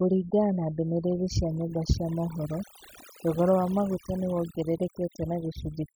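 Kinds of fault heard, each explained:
Overdone noise removal: a noise reduction stage was pushed far too hard, so it cuts individual frequency bands down to almost nothing whenever their level sits close to what it has judged to be noise, and the softer parts of the speech fall below that line too. Across the whole clip the background drops and breaks up into small twinkling specks.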